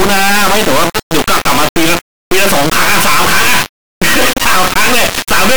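The speech clip was stored as 32-bit integer samples, but the playback side read those bytes as 32-bit float, an integer read as float fault lasting the whole clip. Each integer bit pattern becomes a nonsense float: tiny, invalid or vastly over full scale. The output therefore slams between silence and the clipping ceiling, so the speech turns into an extremely loud, harsh square-wave buzz that drops out to silence wherever the signal is very quiet.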